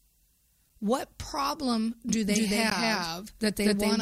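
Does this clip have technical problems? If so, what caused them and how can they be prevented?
Yes. At 2.09 s a doubled audio track appears, likely from a second, slower capture path feeding the same speech into the mix. A dry, full-band copy lands abruptly about 200 ms behind, at roughly equal level, and persists to the end. Prevent it by routing each source into the mix only once.

At 2.70 s there is a gap between stream segments. The time stamps of two adjoining segments fail to meet, so the player fills the missing span with silence, cutting a hard-edged hole of about 15 ms without losing any audio. Prevent it by deriving segment time stamps from the running sample count so consecutive segments join exactly.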